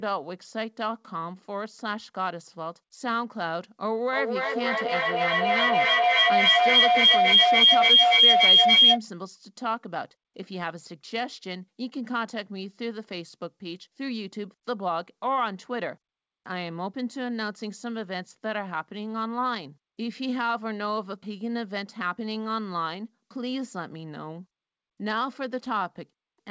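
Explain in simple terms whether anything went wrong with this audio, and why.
From 4.13 to 9.04 s, a feedback howl builds into a shrill tone around 3 kHz, pulsing about every third of a second. Two devices are feeding each other's sound back. Unlike an ordinary echo, which fades, each repeat grows louder.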